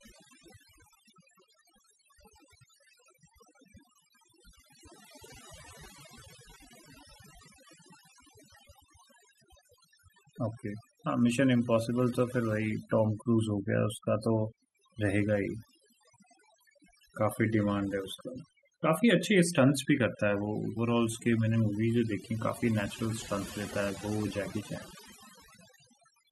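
From start to finish the speech carries overdone noise removal: a noise reduction stage set far too aggressively has cut individual frequency bands down to nothing whenever their level sat close to its noise estimate. The background collapses to near silence dotted with twinkling, chirpy specks, and the voice loses its softer detail. A spectrogram shows a dark floor scattered with isolated bright flecks, with the voice's harmonics ragged and patchy.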